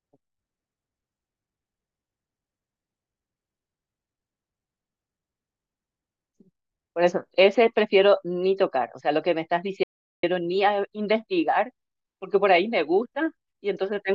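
At 9.83 s the speech is cut off mid-flow by an audio dropout to silence lasting about 0.4 s, until 10.23 s, likely from a lost input or link. The gap is silent with no room tone left, a flat line on the waveform and a blank band across the spectrogram.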